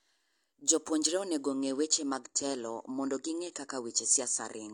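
At 1.50 s a slowing connection forces the adaptive stream to a lower bitrate, which holds to the end. The switch is sudden, with no gap. Nothing remains above 9.6 kHz, and the speech turns dull and artefact-laden, which fits a 96-to-32 kbit/s AAC step-down.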